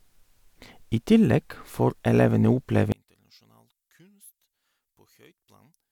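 At 2.92 s, right after "I tillegg får elevene", the speech collapses by about 35 dB and stays almost gone until the end, the sign of one channel inverted. With one side's polarity likely reversed, the material common to both channels cancels when summed to mono, leaving only a faint residue. On a waveform the envelope drops to a near-flat line. On a spectrogram the low and mid energy vanishes, with only weak traces remaining.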